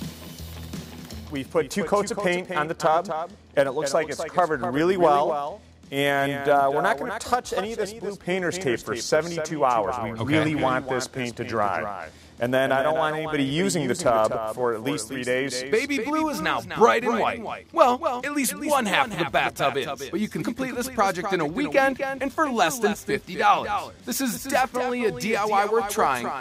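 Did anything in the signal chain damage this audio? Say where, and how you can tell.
Yes. A doubled audio track runs through the whole clip. A full-band copy trails the sound by about 0.3 s, roughly 10 dB quieter, with no decay or room colour. This likely comes from a slower second capture path or an edit holding two misaligned copies.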